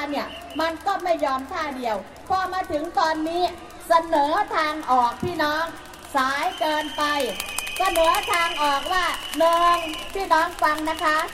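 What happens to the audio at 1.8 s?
Nothing goes wrong at 1.8 s; the sound carries on intact through that moment.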